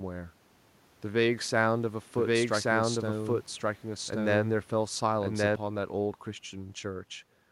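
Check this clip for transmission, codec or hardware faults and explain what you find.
One fault is present. A doubled audio track runs from 2.18 to 5.56 s. The speech is mixed in twice, likely because a slower capture path or an edit holds a second copy out of step. That copy trails by about a second at roughly equal level, dry and full-band, starting and stopping abruptly.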